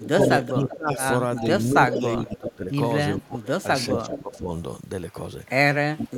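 From 0.0 to 2.55 s, an echo leak is heard. A delayed copy of the speech returns about 385 ms late. It is loud, only about 5 dB below the direct speech. The likely cause is a loudspeaker on the far end whose echo canceller let its own microphone pickup pass back.

Overlapping it, from 0.51 to 2.71 s, speech is suppressed in double talk. The speech dips in pieces, about a second in total, by up to roughly 15 dB. Both sides were likely talking at once, so the canceller turned its own talker down along with the echo.

A second echo leak runs from 3.17 to 4.19 s. It has a 390 ms delay and is weaker, around 10 dB below the speech.

From 3.26 to 4.5 s, suppression in double talk returns. The speech loses level in fragments for under a second, dropping by as much as 20 dB.

A final suppression from 5.95 s to the end cuts the speech briefly but deeply, by about 30 dB.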